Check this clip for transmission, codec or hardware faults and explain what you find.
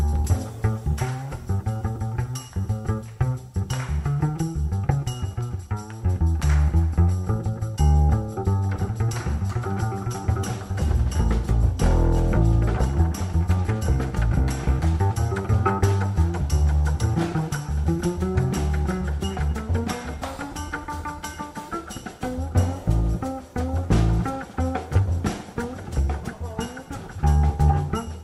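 Nothing audible here points to a transmission, codec or hardware fault.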